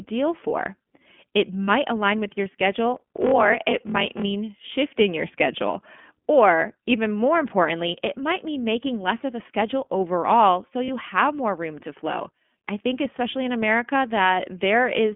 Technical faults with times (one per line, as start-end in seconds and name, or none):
0.00-15.16 iLBC codec
1.65-1.70 lost iLBC frames
2.92-4.23 block size mismatch (padded)
10.84-10.89 lost iLBC frames